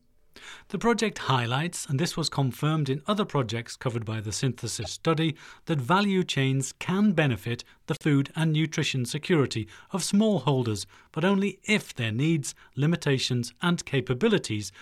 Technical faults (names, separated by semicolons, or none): corrupt frame decoded